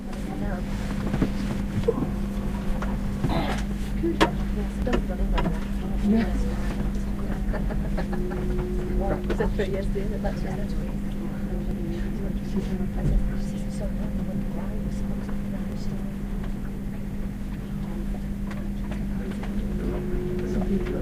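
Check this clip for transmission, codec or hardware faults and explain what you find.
Five skips break the recording's continuity, at 1.22, 4.82, 11.71, 15.72 and 19.84 s. Each is a jump ahead, losing roughly 70, 70, 40, 20 and 40 ms, likely a dropped buffer (overrun): samples were overwritten before capture, and the sound is spliced without silence, unlike an underrun's gap.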